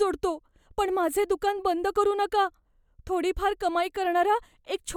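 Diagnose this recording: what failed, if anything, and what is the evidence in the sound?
Nothing failed here: I hear no fault at any stage of the chain, and the speech comes through without a single click, dropout or glitch to flag.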